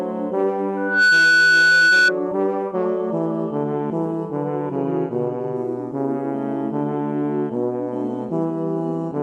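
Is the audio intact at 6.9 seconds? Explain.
Yes, the audio is intact at 6.9 seconds, with no dropout, click, distortion or other fault at that moment.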